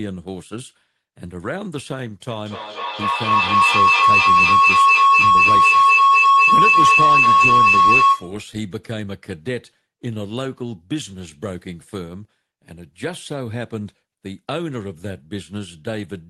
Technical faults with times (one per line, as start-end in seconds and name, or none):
2.29-8.41 feedback howl